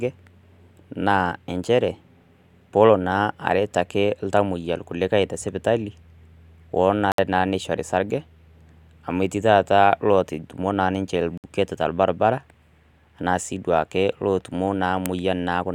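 Digital broadcast dropouts at 7.12 to 7.19 s and 11.38 to 11.44 s: the receiver muted on corrupt frames, cutting about 64 ms of speech each time, consistent with two lost frames.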